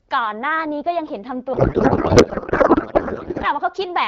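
From 1.53 to 3.47 s the speech gives way to garbled noise and warble that barely tracks it. This is a codec payload misread: the AMR-WB decoder is parsing frames with every field shifted, which points to octet-aligned packing being read as bandwidth-efficient. Unlike packet loss or bit errors, which leave brief gaps or isolated glitches, the garble is continuous for the whole stretch and ends cleanly once the packing agrees again, returning to clear HD Voice.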